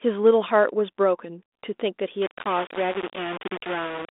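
Speech heard over a telephone-band line, with the light coding of 32 kbit/s G.726 ADPCM and nothing above 3.8 kHz. From 2.22 s to the end the sound turns coarse and grainy, most likely from low bit depth without dither, with only about 4 bits and plain rounding. The grit sits only about 10 dB below the speech and moves with it. Quiet stretches collapse to silence or sputter, whereas dithered noise would be a steady hiss independent of the sound.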